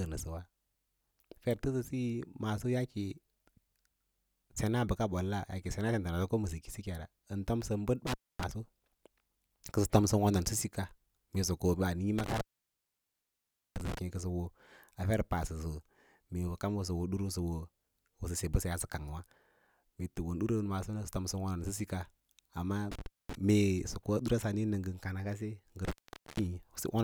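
Speech that drops out abruptly with crackle at each edge, at 8.07 s (about 0.26 s), 12.18 s (1.35 s), 22.92 s (0.23 s) and 25.85 s (0.46 s). This is an intermittent contact: a loose cable or plug briefly opening the signal path.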